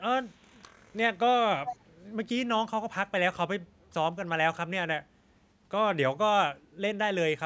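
From 0.22 to 1.0 s a very faint delayed copy of the speech trails it by about 0.34 s, then returns from 1.66 to 1.85 s much louder: an echo leak, likely a far-end echo canceller letting speakerphone pickup through. Unlike room reverberation, it is a distinct repeat, not a smeared tail.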